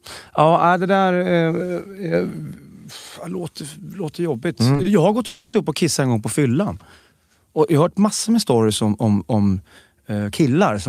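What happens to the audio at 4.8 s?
Right around 4.82 to 4.86 s there's a short stall from a late packet. A packet showed up late, the jitter buffer ran dry, and the receiver stretched the last bit of speech by about 20 ms. Nothing's lost, just a briefly held sound with a faint buzzy dip.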